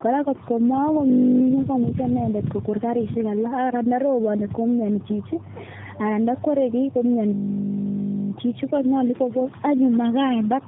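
Tandem speech coding runs through the whole clip. The speech sounds rough, muffled and warbly, as if coded three times in a row, which fits repeated AMR-NB narrowband coding. Each pass degrades the last. Nothing is heard above 3.7 kHz.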